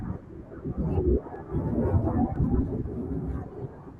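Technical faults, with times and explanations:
0.35 to 3.36 s, clock drift buffer slips: clicks recur every 1.0 s, about four in all. The likely cause is two devices on separate clocks, off by roughly 150 ppm. Their shared buffer drifts until a few samples are dropped or repeated, breaking the waveform.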